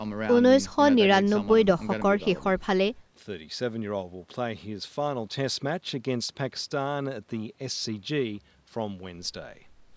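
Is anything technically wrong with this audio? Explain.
No, nothing is technically wrong with this audio.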